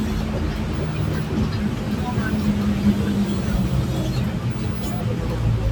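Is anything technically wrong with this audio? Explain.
No, nothing technically wrong can be heard here.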